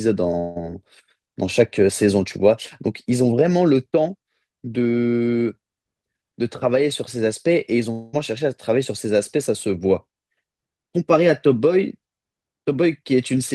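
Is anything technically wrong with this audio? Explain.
Yes. There are two long network dropouts, from 0.39 to 0.58 s and from 7.92 to 8.15 s. About 160 ms and 220 ms of speech are lost. Concealment fills each gap with a fading buzz, likely from a network dropout, and the speech then resumes further on. On a spectrogram each gap shows smeared, repeating horizontal bands that fade out. On the waveform the envelope decays smoothly instead of dropping to flat silence.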